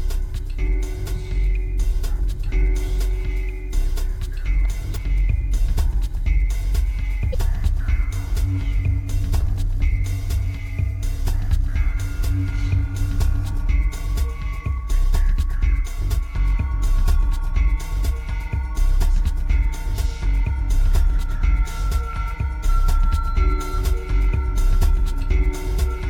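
Damaged data in a compressed stream occurs twice, from 4.93 to 4.97 s and again from 7.30 to 7.35 s, each lasting about 44 ms. In both places some bytes of the encoded stream are corrupt, so the decoder cannot correctly read the frames there. It loses sync and searches for the next valid frame header before normal playback resumes. Each event is a brief chirp or blip that interrupts the sound.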